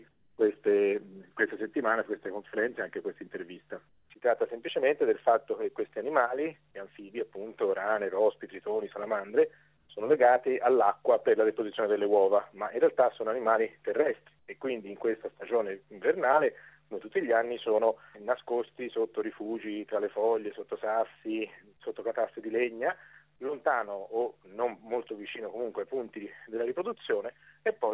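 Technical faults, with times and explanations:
0.11–0.38 s, 3.89–4.10 s, 9.77–9.89 s, 14.39–14.48 s: comfort noise in place of the background. In these gaps, which last 270, 210, 120 and 90 ms, the real background is gone. A flat, featureless hiss fills each one. It sits about 6, 8, 2 and 9 dB below the surrounding background, which is itself about 44 dB under the loud parts. The likely cause is discontinuous transmission. The sender stopped sending during quiet, and the receiver filled in synthetic noise.
0.36–0.38 s: onset clipped by the voice detector. The sound returns abruptly here and lacks its soft start. About 20 ms at the beginning is missing, covered by the tail of the comfort noise. This likely comes from a voice detector that was slow to notice the sound restarting, so those first moments were never sent. The clip has a narrow band, with nothing above 4 kHz.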